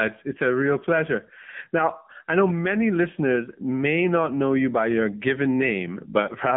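Throughout, AMR narrowband mobile codec coding confines the speech to about 150 Hz–3.5 kHz and adds a buzzy, synthetic texture, which fits a low mode near 8 kbps.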